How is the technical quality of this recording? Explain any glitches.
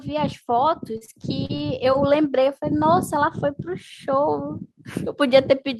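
The recording has two faults, both early in the speech.

From 0.05 to 3.4 s, automatic gain rising lifts the level by about 6 dB. The gain control judged the input too quiet. Voice and background swell together.

From 0.97 to 1.62 s, repeated packet loss gives a choppy, robotic sound. Short holes, the longest 37 ms, are patched by stretching the previous sound.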